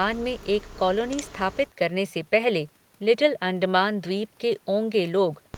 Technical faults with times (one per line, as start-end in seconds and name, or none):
none